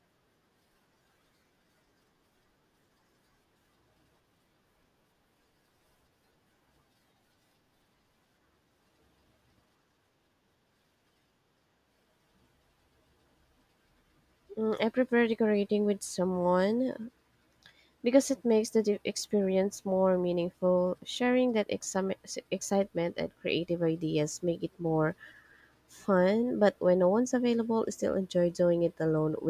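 No technical faults can be heard anywhere in the speech. There are no events to time or describe.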